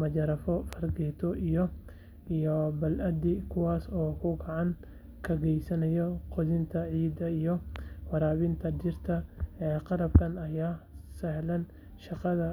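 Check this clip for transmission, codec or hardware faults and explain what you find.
Two loud pops interrupt the speech. Sharp single pops at 0.73 to 0.75 s (about 15 dB above the speech) and 7.76 to 7.78 s (about 10 dB, just before "waraabinta dhirta"), likely from a voltage spike, such as a plug, switch or static discharge.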